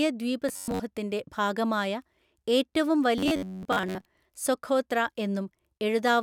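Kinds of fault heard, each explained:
Robotic sound from repeated short buffers: audio likely arrived too seldom, so playback looped a slice of about 11 ms while most of the real signal was skipped. From 0.49 to 0.82 s and from 3.18 to 4.06 s, the speech becomes a rigid metallic buzz near 94 Hz.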